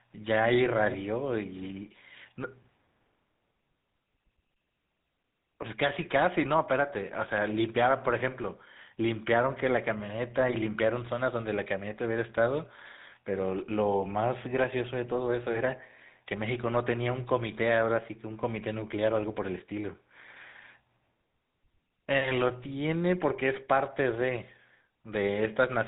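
From start to finish the speech carries GSM full-rate codec damage, plainly audible: a buzzy, gravelly roughness from pulse-driven excitation, consistent with about 13 kbps, and nothing above 3.8 kHz. Simple band-limiting would sound muffled but smooth; this grit marks the codec.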